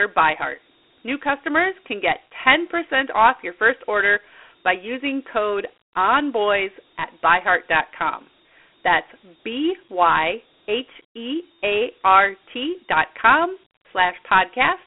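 Throughout the speech, Dialogic VOX ADPCM coding is plainly audible. Each sample is stored as a coarse 4-bit step, consistent with 32 kbps, leaving a gritty hiss trailing the speech. The line band spans 250 Hz to 3.4 kHz, with nothing above 3.9 kHz.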